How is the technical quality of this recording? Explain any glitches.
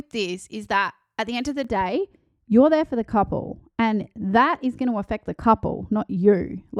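The recording has one clear fault, lasting from 1.64 s to the end.

De-emphasis applied wrongly, from 1.64 s, just after "the end of the": a treble-cutting filter, meant to reverse a high-frequency boost, was run on speech that had no such boost, or was run twice. The response therefore falls away smoothly above the midrange, reaching about 11 dB down at 10 kHz relative to 1 kHz. Consonants lose their crispness, and the speech turns dull and muffled from that point on.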